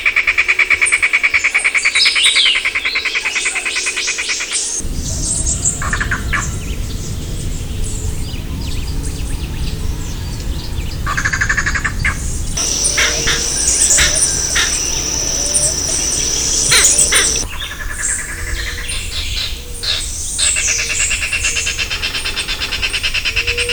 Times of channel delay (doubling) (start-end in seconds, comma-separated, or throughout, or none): none